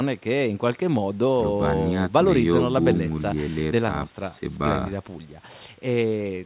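There are no technical faults to describe in time order; the speech carries the narrow band of a G.711 A-law call at 64 kbps, with nothing above 4 kHz.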